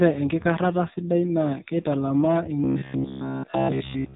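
From the start, the speech carries the AMR narrowband mobile codec sound. Nothing above 3.8 kHz survives, and heavy damage gives a buzzy, synthetic texture that points to a low bitrate around 5.9 kbps. Unlike plain low-pass filtering, the voice itself sounds modelled rather than merely dulled.

From 2.64 s to 4.15 s the sound turns into a rigid, metallic drone fixed at 66.8 Hz. It is likely robotic sound from repeated short buffers: a chunk of roughly 15 ms replays in place of essentially all new audio. The constant pitch separates it from codec warble, which shifts with the sound.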